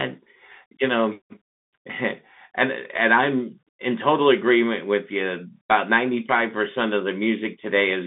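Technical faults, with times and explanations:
Throughout, Bluetooth CVSD headset codec: one-bit adaptive-step delta coding confines speech to 150 Hz–3.6 kHz, leaving scratchy sibilants and granular hiss, which fits a 64 kbps link.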